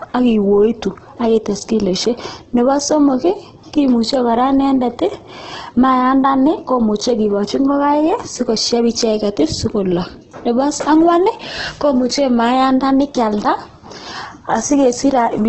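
Throughout, the speech sounds grainy and rough, with nothing above 8.1 kHz. Unlike MP3's swirling holes, this is likely heavy Opus compression at a very low bitrate.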